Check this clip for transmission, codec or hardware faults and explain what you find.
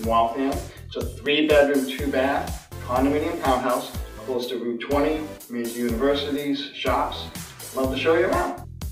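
Nothing faulty can be heard anywhere in this recording.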